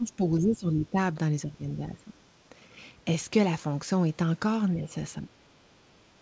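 An echo canceller that likely could not separate this talker from loudspeaker echo while both sides spoke turned everything down, giving speech suppressed in double talk. The speech, carried over a call path whose band stops at 8 kHz, as G.722 would, dips from 0 to 0.97 s and 1.46 to 2.13 s, by about 15 dB each. Briefer drops follow at 4.75 to 4.95 s (about 10 dB) and 5.21 to 5.39 s (about 20 dB).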